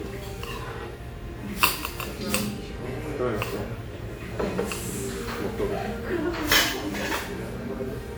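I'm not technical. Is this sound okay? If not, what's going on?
No. Throughout, the sound is swirly, hollow and smeared, with sharp starts blurred. That's generation loss, likely from being squeezed and unpacked about seven times over. Unlike a single heavy compression, the damage piles up, so it sounds murkier than one pass would.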